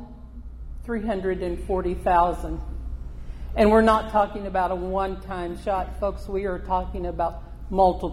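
Nothing stood out as a technical problem on listening.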